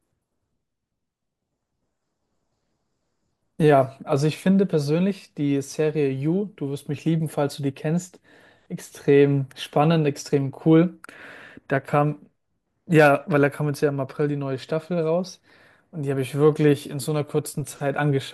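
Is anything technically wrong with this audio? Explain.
No, nothing is technically wrong with this audio.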